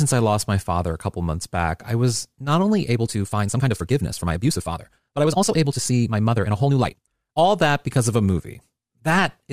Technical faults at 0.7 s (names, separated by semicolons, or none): none